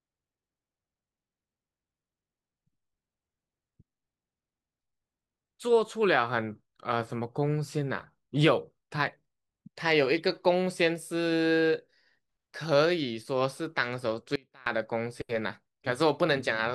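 Speech, with one audio dropout to a faint residue from 14.36 to 14.66 s. For about 0.31 s the voice cuts out abruptly, leaving only a faint leak roughly 25 dB down. The wanted signal was likely lost briefly while the path after the break stayed live.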